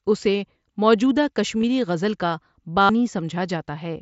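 At 1.62 s there is concealed Bluetooth headset packet loss. A brief gap of about 15 ms between headset and phone was filled by repeating a recent stretch of the waveform. At 2.81 to 2.89 s a longer run follows, about 82 ms. That points to a string of consecutive lost packets. The repeated waveform turns into a steady buzzy tone at full level. A small warble marks where real speech returns, over the light grain of the mSBC link.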